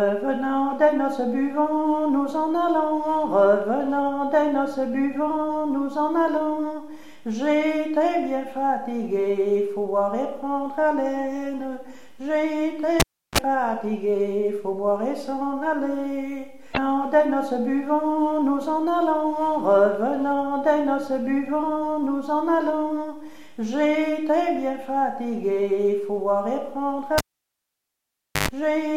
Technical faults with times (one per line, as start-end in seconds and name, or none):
13.00-13.38 cable pulled and plugged in
27.18-28.48 cable pulled and plugged in